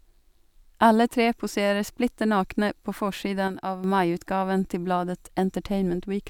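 At 3.48 s, right after "poserer splitter nakne på", the speech and its background noise drop together by about 6 dB in a single step, a sudden gain jump lasting until 3.84 s, before "maiutgaven til". The likely cause is a digital gain change applied without a ramp.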